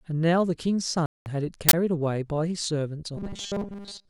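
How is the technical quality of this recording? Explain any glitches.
The recording has three clear technical faults.

From 1.06 to 1.26 s the speech cuts to 200 ms of silence and then resumes, likely a Bluetooth stall where delayed packets let the headphone buffer run dry.

From 1.69 to 1.73 s there is an uninitialised buffer: a 46 ms burst of loud digital noise from leftover memory played as samples, which fits a 2048-sample block.

From 3.17 s to the end, the speech becomes robotic from repeated short buffers. It is a rigid, metallic 200 Hz buzz, likely from one 5 ms block looping while most of the real audio is skipped.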